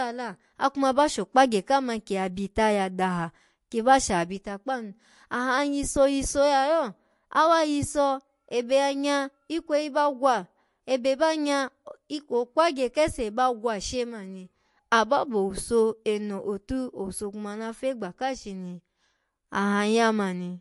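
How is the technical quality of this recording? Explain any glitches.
The quality is noticeably degraded throughout by what sounds like MP3 compression. For the whole clip the speech has a watery, swirling texture, and nothing is heard above about 11.3 kHz. The likely cause is an encoder short of bits, which fits a bitrate around 50 kbps, cutting the treble and dropping weak frequency components that flicker on and off between frames.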